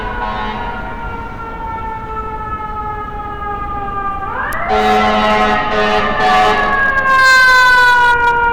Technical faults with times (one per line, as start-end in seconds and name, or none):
4.53-8.46 hard clipping